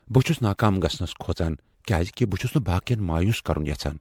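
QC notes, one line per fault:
throughout: generation loss. The speech sounds swirly, smeared and hollow beyond what a single MP3 encode at a rate like 96 kbit/s would produce, with consonant attacks blurred and nothing above 19.8 kHz. This likely comes from about seven rounds of MP3 decoding and re-encoding. Each round quantises the signal again on a shifted frame grid, so fresh quantisation noise and spectral holes accumulate instead of cancelling.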